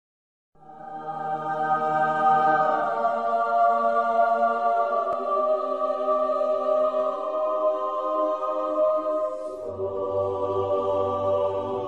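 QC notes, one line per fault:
No faults detected on this pass; nothing to log.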